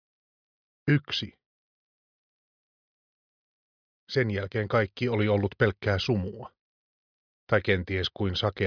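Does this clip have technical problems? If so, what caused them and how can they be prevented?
No, nothing here sounds off technically, so there's nothing to trace back or guard against this time.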